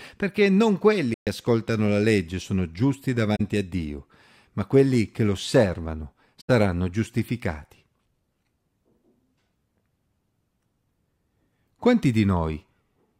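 AAC frame loss with muting at 1.14 s (after "perché non"), 3.36 s (after "la legge sono giusti") and 6.40 s (after "ma quelli che l'osservano"): the decoder zeroed the lost frames, so overlapping windows fade the speech out and in, leaving soft-edged gaps of about 130, 40 and 85 ms.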